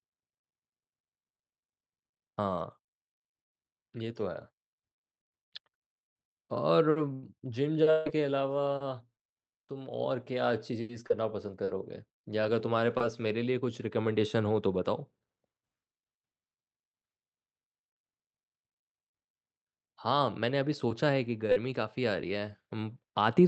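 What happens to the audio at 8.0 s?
Audio stops arriving from 7.91 to 8.07 s, likely a long network dropout. The gap becomes a fading buzz, and 150 ms of speech vanishes.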